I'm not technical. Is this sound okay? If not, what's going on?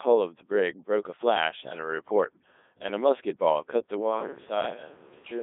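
No, it isn't. The whole clip has been through a Codec 2 vocoder, a very low-data digital radio codec. Rather than keeping the actual recording, it sends a rough description of the speech (pitch, loudness, tone colour) and rebuilds it at the other end from simple tones. That's why it sounds robotic and buzzy throughout, and also thin and phone-like, because everything above about 3.8 kHz is gone and the deepest lows are trimmed too.

Then at about 4.03 s, right through to the end, there's a switch to a distant microphone. The voice suddenly turns hollow and roomy, loses some of its low warmth, drops noticeably in volume, and more background room noise creeps in. The likely cause is that the close microphone dropped out or wasn't used, so the recording fell back on one further away, such as a camera's built-in mic.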